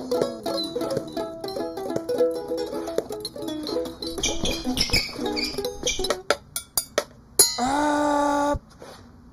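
Throughout the clip, channel delay (comb filtering) leaves the sound hollow: one channel trails the other by roughly 0.2 ms, so the mono sum cancels near 3 kHz and at evenly spaced frequencies above. Unlike a phaser, these notches never move.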